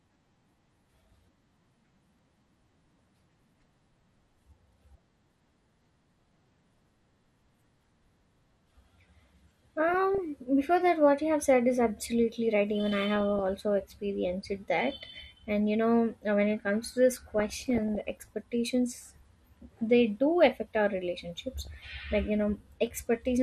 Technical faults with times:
0.00-23.42 MP2 compression
2.99-3.66 DAB burbling
6.78 DAB burbling
9.88-10.18 DAB burbling
12.91-13.40 DAB burbling
17.39-18.28 DAB burbling
21.40-21.74 DAB burbling

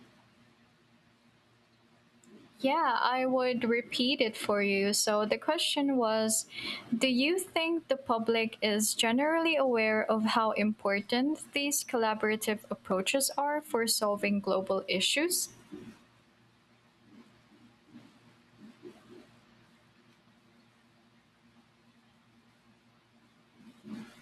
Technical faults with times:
12.91 block of digital silence

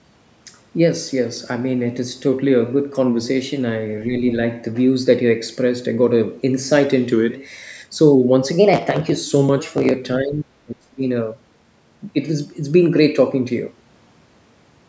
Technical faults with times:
4.11-4.16 speech suppressed in double talk
4.16-4.31 other side's voice leaking through
10.19-11.03 speech suppressed in double talk

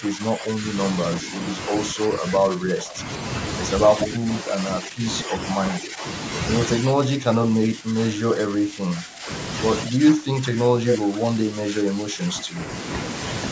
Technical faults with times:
0.00-0.76 speech suppressed in double talk
1.21-3.00 speech suppressed in double talk
3.94-5.37 speech suppressed in double talk
4.00-4.14 echo leak
5.71-6.04 speech suppressed in double talk
6.67-9.29 speech suppressed in double talk
9.86-12.59 speech suppressed in double talk

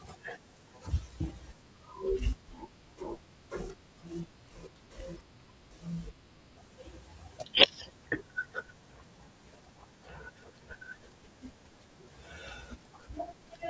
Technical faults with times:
1.62-6.57 wrong sample rate

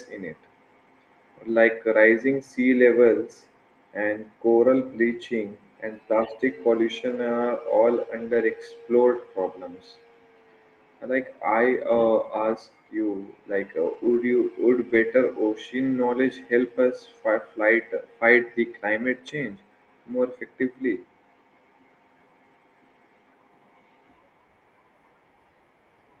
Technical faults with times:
3.05-3.07 lost packet rebuilt from error correction
5.09-5.19 lost packet rebuilt from error correction
8.15-8.41 lost packet rebuilt from error correction
9.15-9.21 lost packet rebuilt from error correction
11.91 lost packet rebuilt from error correction
13.85-14.19 lost packet rebuilt from error correction
14.89-14.99 lost packet rebuilt from error correction

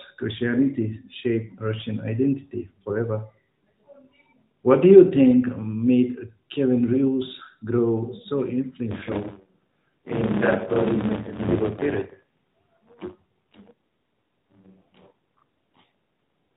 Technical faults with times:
8.91-16.56 buffer tearing

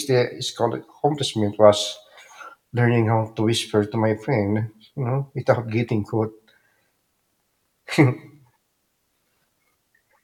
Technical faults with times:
none

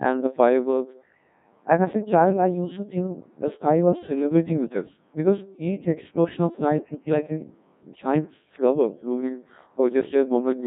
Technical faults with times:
0.00-10.67 Codec 2 vocoder

